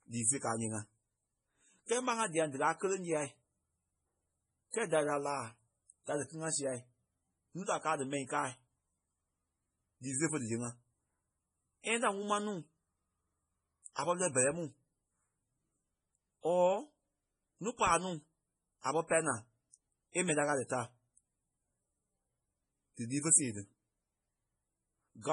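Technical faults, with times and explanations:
Throughout, MP3 compression: the speech sounds watery and swirly, with nothing above 10.5 kHz and heavy damage that fits a low bitrate around 24 kbps, likely from MP3 encoding. Unlike a plain low-pass filter, the surviving bands flicker from frame to frame.
4.71 to 4.74 s, pre-echo: a short hiss lasting about 34 ms runs just before "kɛ́ɛ da lì", and the attack itself sounds softened. The codec's quantisation noise was spread across the block ahead of the onset, so it leads the attack rather than trailing it like reverb.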